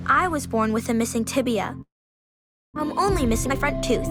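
From 1.81 to 2.78 s the sound fades into a decaying buzz, then silence, and resumes with about 600 ms missing, likely a long network dropout. From 3.02 to 3.60 s the audio runs hurried at 125% speed, same pitch: a jitter buffer speed-up trimming roughly 150 ms of pitch periods.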